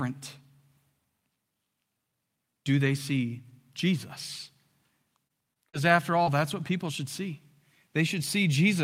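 From 5.27 to 6.28 s, just before "that's what people should", repeated packet loss gives a choppy, robotic texture. Five short holes, the longest 39 ms, are each patched by stretching the preceding sound. Unlike a single dropout, they recur in close succession, so about 12% of the stretch is concealed.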